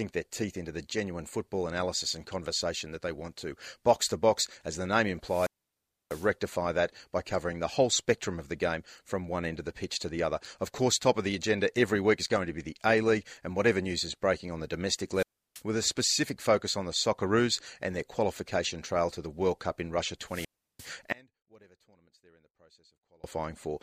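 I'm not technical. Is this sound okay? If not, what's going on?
No. Three times the speech briefly hisses, drops to near silence, then returns: 5.23 to 6.33 s after "as the name", 15.14 to 15.62 s after "breaking on the domestic", and 20.25 to 20.93 s. That is wireless microphone squelch dropout, where the radio signal weakens and the receiver mutes. From 21.13 to 23.24 s the voice nearly vanishes, leaving a faint trace, likely from one channel inverted, so the two sides cancel when combined.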